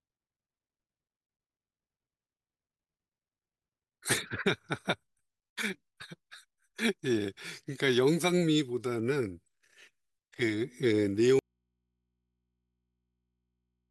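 At 11.39 s the speech cuts out abruptly in an audio dropout to a faint residue, leaving only mains hum about 55 dB below the signal through to the end, likely from a live but disconnected input. Unlike a pause or fade, the loss is instant, and the hum stays.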